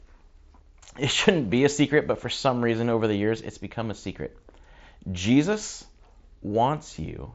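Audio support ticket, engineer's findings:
No faults found.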